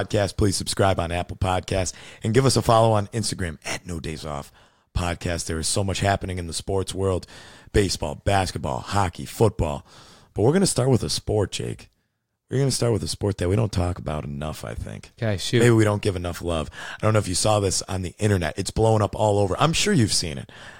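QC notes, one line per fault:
No faults found in this clip.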